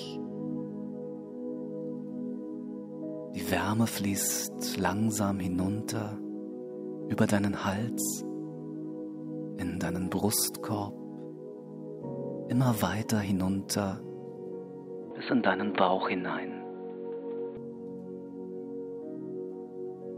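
At 15.11 s the sound abruptly turns dull and boxy. Nothing is left above about 4.4 kHz, so the top end simply disappears. A different background noise comes in with it, sitting roughly 30 dB below the signal. The overall level barely moves, and there is no gap at the change. At 17.57 s the full, clear sound returns just as suddenly. This is likely an input switched to a poorer device mid-recording, with its narrower band and its own noise.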